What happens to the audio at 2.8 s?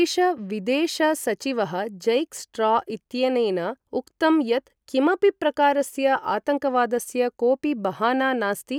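Nothing goes wrong at 2.8 s; the speech carries straight through that moment without any dropout, click or distortion.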